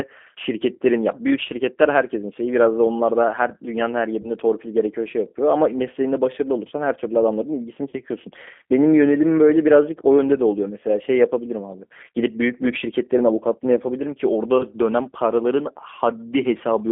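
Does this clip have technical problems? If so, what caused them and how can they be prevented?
Yes. Throughout, the speech is confined to roughly 250 Hz to 3.5 kHz and sounds rough and synthetic. This is the G.729 codec, consistent with an 8 kbit/s G.729A link rebuilding the voice from a filter and sparse pulses. Prevent this by using a wideband codec such as G.722 or Opus.

VoIP packet loss concealed by the speech codec occurs at 4.22–4.31 s, 7.89–7.95 s and 14.58–14.64 s. The decoder stretches its last frame into a fading buzzy tone or coloured noise, and the speech stays weak briefly afterwards. The gaps match one, two and one 20 ms packets lost. Prevent this with a more reliable network path, QoS priority for voice traffic, and forward error correction.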